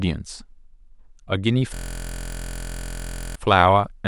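Speech clip. System hang loop from 1.74 to 3.35 s. One 23.22 ms slice repeats as a 43.1 Hz buzz, fitting a frozen 1024-sample buffer.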